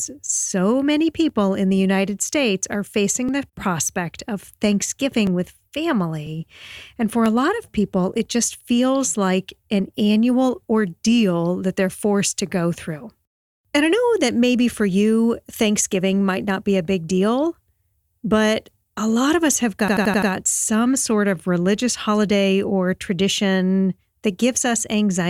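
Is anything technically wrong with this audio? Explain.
Yes, there are two faults. An overlap between stream segments occurs at 1.29, 2.29, 3.29, 5.27, 6.27, 7.26 and 8.25 s, about once per 1-second segment. The timestamps of adjacent segments collide, and the player trims the overlap away from speech that was never actually duplicated, so a sliver of audio disappears. Each time, the waveform jumps with a small click or skip, including right before "the prospect of" and between "a lot of people" and "just feels like an".

A system hang loop runs from 19.88 to 20.31 s, after "lot of us have" and before "some sort of religious". The system stalled while the audio hardware kept replaying its ring buffer, which fits a 4096-sample buffer. An 85 ms slice repeats five times at about 11.7 Hz, producing a stuttering, machine-gun effect, with essentially no audio lost.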